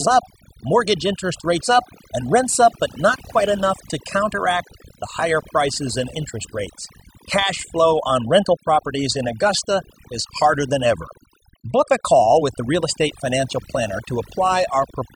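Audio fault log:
Throughout, overdone noise removal: the background drops and breaks up into twinkling specks. An over-aggressive noise reduction stage is pulling individual frequency bands down or off whenever they sit close to its noise estimate, taking quieter parts of the speech with them.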